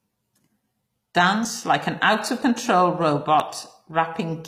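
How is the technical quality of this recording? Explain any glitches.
The recording has plainly audible degradation: coarse, gritty treble throughout and three brief skips in the speech.

Throughout, the upper range sounds metallic and lispy on sibilants, most likely from HE-AAC compression at a low bitrate around 24 kbps. Spectral band replication rebuilds the treble from copied lower bands, and nothing is present above 14.9 kHz. A spectrogram shows a hard ceiling there and smeared, repetitive high bands.

At 1.45, 2.42 and 3.40 s, one second apart, a short piece of speech drops out, with the two sides butted together and no gap. This is audio missing between chunks, likely from 1-second processing blocks each losing roughly 30 ms at the join. The waveform shows an abrupt discontinuity at each point.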